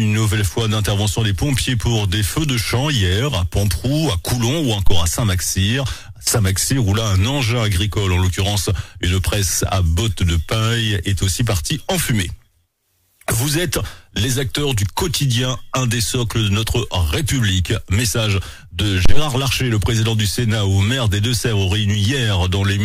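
At 4.87 s and again at 19.06 s a phantom power thump lands: a deep, low-frequency blow peaking near about -2 dBFS, dying away within roughly 50 ms and gone by 5.09 s and 19.28 s. A supply switched on a live input sends a voltage step through the coupling capacitors. Unlike a handling bump, there is no rustle or friction, just a clean single pulse that stays nearly identical in level and shape both times.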